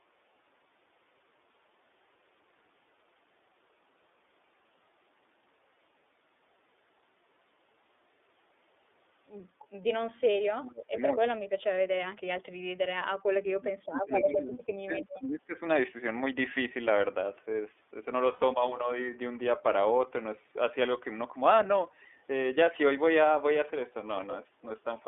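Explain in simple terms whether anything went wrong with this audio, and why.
Several things went wrong. Throughout, the call was carried by the iLBC codec, a low-rate phone-line codec that keeps only the range between roughly 300 Hz and 3.6 kHz and rebuilds each 30 ms slice on its own. The voice sounds thin, slightly rough and a bit synthetic.

From 10.12 to 11.43 s and again from 13.51 to 15.54 s, the speech is pushed far down, dipping and fading out in pieces for about a second and then about two seconds. The likely cause is speech suppressed in double talk: an echo canceller heard both sides at once and muted both.

At 18.33 s, lost iLBC frames left a 90 ms hole, which fits about three missing 30 ms frames. The decoder filled it by repeating the last bit of sound, so there is a brief held, buzzy tone before the voice returns to normal at 18.43 s.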